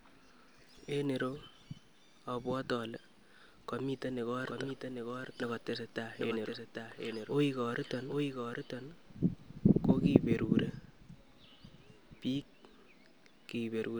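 Speech with a doubled audio track from 4.46 to 10.32 s: a second full-band copy trails the original by roughly 0.7 s, a few dB quieter, and cuts in and out abruptly. There's no decay or room colour, so it's likely a slower capture path mixed back in.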